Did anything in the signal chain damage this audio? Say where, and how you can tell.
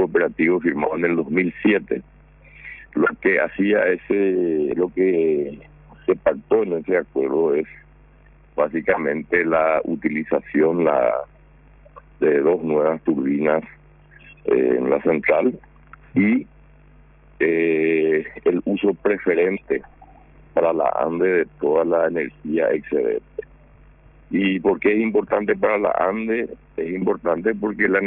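Yes, at a sample-rate conversion step. It's aliasing, present throughout: everything above the 3 kHz fold is mirrored back down as gritty, unrelated tones roughly 25 dB under the signal, which fits a drop to around 6 kHz with no anti-alias filter in front.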